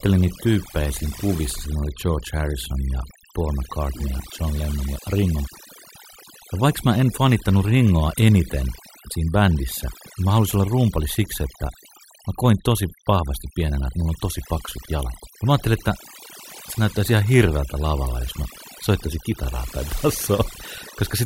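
Overdone noise removal runs throughout. Noise reduction set too strong mutes bands near the noise floor, leaving lowered, twinkling backgrounds.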